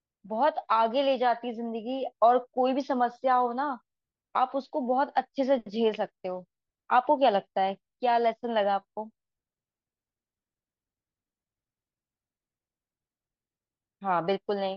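No technical faults can be heard anywhere in this recording.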